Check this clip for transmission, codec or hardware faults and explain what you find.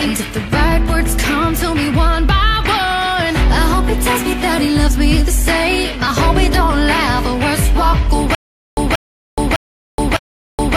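A playback or streaming stall, likely, produces a stutter with silent gaps from 8.35 s to the end: a 182 ms fragment repeats four times, separated by 424 ms of digital silence.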